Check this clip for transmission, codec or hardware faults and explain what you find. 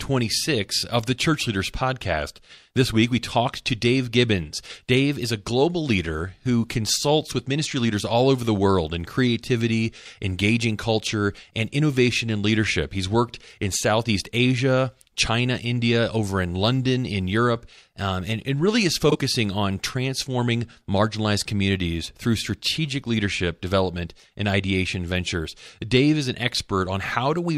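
One fault is present in the speech. At 19.09 to 19.16 s, frames out of order: two adjacent blocks of about 26 ms each were decoded swapped, producing a brief garbled flutter with no time lost.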